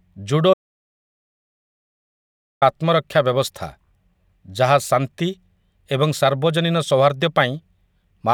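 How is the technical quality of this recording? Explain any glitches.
The recording has one clear technical fault, a long break in the speech early on.

From 0.54 to 2.62 s there is an audio dropout to silence lasting about 2.1 s. The speech stops abruptly and resumes on "ଆତ୍ମରକ୍ଷା ବ୍ୟବସ୍ଥା". The input was likely lost through a disconnect, link failure or mute while the recorder kept writing silence. The gap has no room tone, and anything said during it is gone. A waveform would show a flat line, and a spectrogram a dark vertical band with hard edges.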